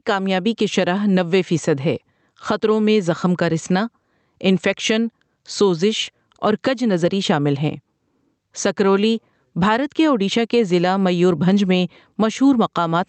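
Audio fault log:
Throughout, gain pumping: the level swings by about 10 dB. Loud and quiet passages sit unnaturally close together, so the speech sounds squashed. The likely cause is microphone gain set far too high, so a fast limiter or compressor clamps down on every peak and releases in the gaps. The audio is also band-limited to about 8 kHz, consistent with a call codec such as Opus.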